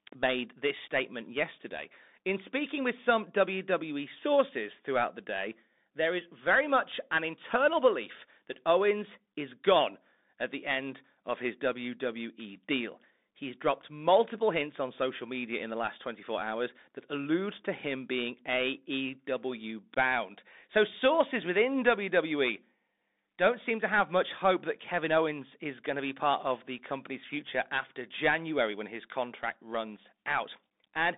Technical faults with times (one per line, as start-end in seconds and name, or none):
0.00-31.17 Bluetooth CVSD headset codec